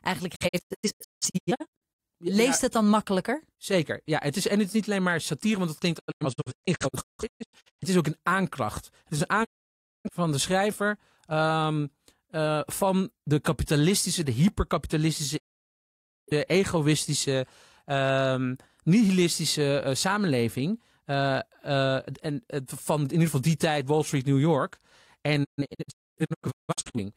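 A digital broadcast dropout recurs as the receiver loses or rejects frames and mutes with a 20 ms fade. Speech vanishes at 0.34–2.00 s, 5.98–7.83 s after "satire want het klinkt", 9.43–10.11 s before "van de schrijver", 15.36–16.32 s before "egoïstische ehm nihilistische samenleving", and 25.43–26.99 s. The first, second and last dropouts break into several short holes.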